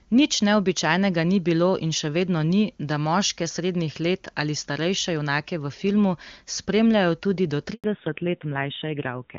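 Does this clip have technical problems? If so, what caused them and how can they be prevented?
Yes. Handover gap, 7.74 to 7.84 s: the speech cuts out for about 100 ms. The phone was switching the call from one network to another, and no speech frames arrived during that switch, so the sound falls silent rather than fading naturally, and whatever was said in that tenth of a second is lost. Preventing it means improving coverage or tuning the handover so the phone can set up the new link before dropping the old one.

Fallback to narrowband, from 7.84 s to the end: right after the gap, everything above 4 kHz disappears and the speech turns dull and rougher. Before the switch the call was using the AMR wideband (HD Voice) codec, which sounds clean and full at what seems to be its top rate. After the handover the link renegotiated to an older narrowband codec, AMR-NB at around 7.4 kbit/s. Prevention means ensuring the target network and the call path both support wideband, so HD Voice survives the handover.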